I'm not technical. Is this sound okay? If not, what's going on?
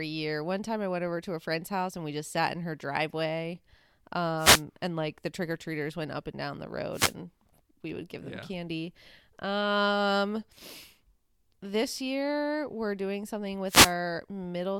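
No. There are three wireless microphone noise hits: 4.37 to 4.63 s, just before "and like the trick", 6.92 to 7.14 s, after "up and down the", and 13.66 to 13.94 s, after "year we're doing something". Each is a brief swish of static. The radio microphone's signal faded for a moment, letting noise cover the speech.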